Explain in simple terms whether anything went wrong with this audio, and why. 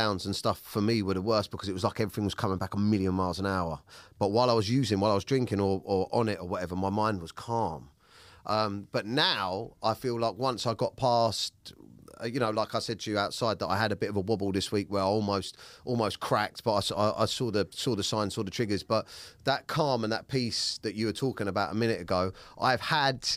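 Nothing went wrong with this recording that a listener would notice. The speech runs without any break, glitch or change in the sound along the way.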